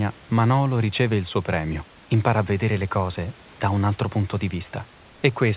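Nothing goes wrong in this speech clip: it's a narrowband G.711 call with nothing above 4 kHz and a faint room noise sitting about 29 dB below the talking, which is just how this kind of call and room sound.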